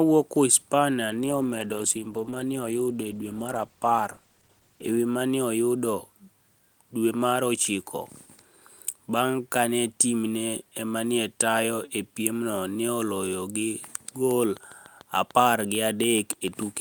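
From 1.11 s to 5.07 s the speech goes through a call bitrate drop. The encoder's rate falls from 32 kbps to 13 kbps and stays at that floor for about 3.9 s, so the codec has to spend far fewer bits on each frame. Quantisation becomes coarse and the upper band is cut away, and the speech turns muffled with a rough, watery texture. Full clarity returns only once the rate recovers after 5.07 s.

At 14.57 s a train of clicks begins and runs to the end of the recording at 16.81 s. The pulses arrive at a regular spacing of 6.79 per second. Each has much the same shape, and they peak at roughly the level of the speech itself. They are heard as a steady ticking laid over the audio, continuing through pauses as well as speech. The cause is likely electrical interference from nearby equipment or a faulty connection or power supply.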